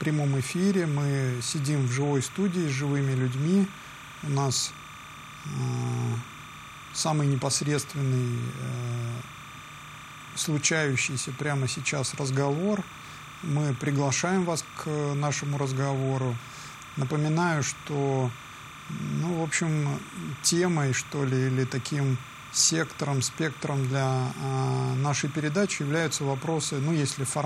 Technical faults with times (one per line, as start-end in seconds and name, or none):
0.00-27.46 timecode bleed